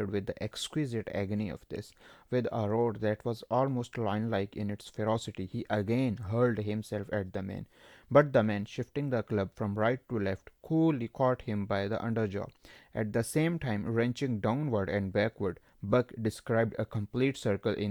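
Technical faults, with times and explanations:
No technical faults can be heard in this speech recording. There is nothing to time or explain.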